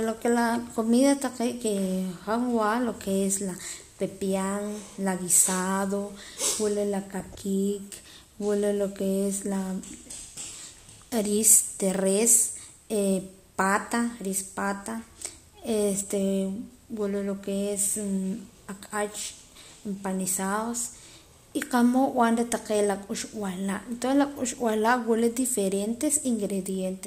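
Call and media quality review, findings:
DAB burbling in the speech at 1.66 to 1.69 s and 7.20 to 7.37 s: short noise blips in single sub-bands. Probable cause is weak reception letting bit errors of roughly 0.15 percent past error correction into MP2 frames, corrupting audio samples. Spectrogram: isolated sub-band blocks flaring for single-frame durations.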